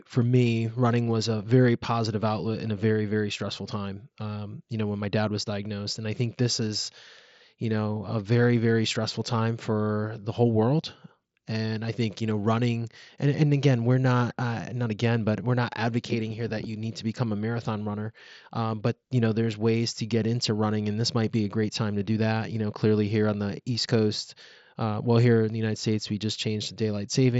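Nothing goes wrong anywhere in this speech recording; it comes over a Bluetooth mSBC headset link, so the sound simply tops out at about 7.7 kHz, the way that wideband path normally does.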